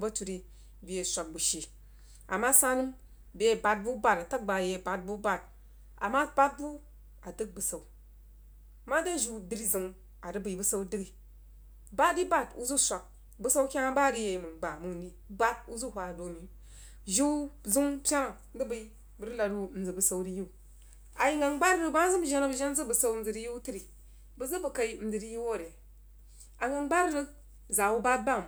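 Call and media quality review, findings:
Mains hum, whole clip. Steady low tone at 50 Hz, with some low harmonics, sitting roughly 25 dB under the speech. Probable component: grounding or power supply in the capture chain. Ground loop or nearby transformer coupling the power line into the signal.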